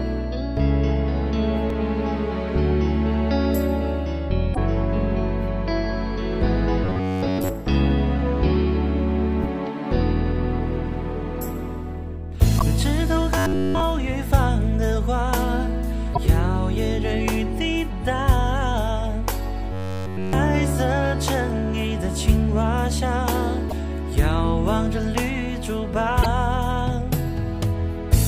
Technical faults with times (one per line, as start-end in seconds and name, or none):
4.53-4.58 broken MP3 bit reservoir
6.84-7.49 robotic sound from repeated short buffers
12.58-12.62 broken MP3 bit reservoir
13.38-13.80 robotic sound from repeated short buffers
16.13-16.18 broken MP3 bit reservoir
19.72-20.33 robotic sound from repeated short buffers
23.68-23.73 broken MP3 bit reservoir
26.22-26.26 broken MP3 bit reservoir